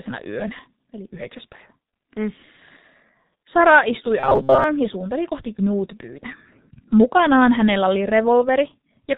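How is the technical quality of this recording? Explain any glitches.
The technical quality is poor. Heavy codec damage runs through the whole recording, and there is one short robotic glitch.

The G.723.1 codec is present throughout. Its low bitrate, which fits about 6 kbit/s, and slow-updating voice model leave the speech muffled and hoarse, with smeared consonants. On a spectrogram, all energy stops abruptly near 4 kHz, and the fine harmonic detail below looks blocky.

From 4.20 to 4.64 s, the speech turns into a rigid metallic buzz at 134 Hz. This is likely robotic sound from repeated short buffers, about 7.5 ms long, played over and over while most of the real audio is skipped. The waveform shows an identical cycle repeating, and the spectrogram shows flat, evenly spaced harmonic lines.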